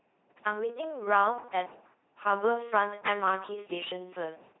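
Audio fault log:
throughout: LPC-10 vocoder. The speech comes out as a buzzing, machine-like voice with heavy damage and nothing above 3.9 kHz, which fits a 2.4 kbit/s LPC-10 coder. Each moment is rebuilt from a pulse train or from noise fed through a short all-pole filter, so sounds are forced to be fully voiced or fully unvoiced. Unlike a CELP-type codec, no natural breathiness or waveform detail survives, only a synthetic buzz-or-hiss.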